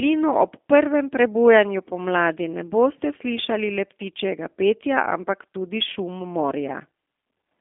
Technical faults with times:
0.00-7.60 G.729 codec

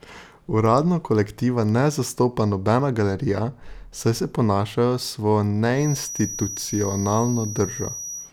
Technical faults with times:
5.71-8.33 feedback whistle

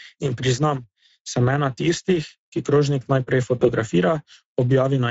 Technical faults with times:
0.00-5.10 Speex codec
3.59-3.69 VoIP packet loss concealed by the speech codec

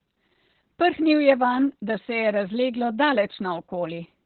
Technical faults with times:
0.00-4.26 Opus voice compression

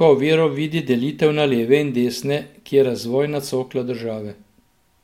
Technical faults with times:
none

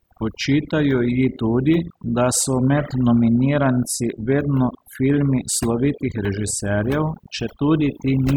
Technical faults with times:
0.00-8.37 overdone noise removal

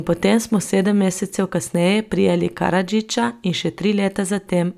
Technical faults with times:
none

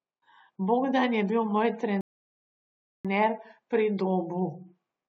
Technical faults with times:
2.01-3.05 rebuffering stall

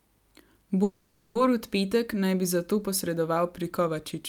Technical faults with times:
0.83-1.36 call audio freeze

